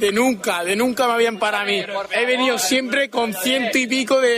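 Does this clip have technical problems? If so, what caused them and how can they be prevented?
No, nothing technical goes wrong here, so there's no cause to track down or anything to prevent.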